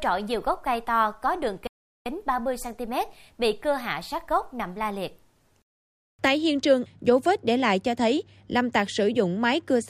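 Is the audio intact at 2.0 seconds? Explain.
No. A playback stall runs from 1.67 to 2.06 s, so 2.0 s falls inside it. The speech cuts off mid-flow into roughly 385 ms of silence, likely because the player ran short of data or its thread was blocked, then resumes.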